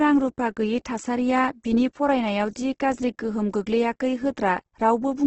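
Opus compression damage runs through the whole speech clip, and it is heavy. Nothing is present above 8.2 kHz, so the top of the spectrum is cut away and the sound is dull. The codec kept each band's energy but had too few bits to code detail. It filled the gaps with folded or noise-like content. The result is rough and grainy rather than swirly. This likely points to Opus in its music mode at a low bitrate, near 12 kbps.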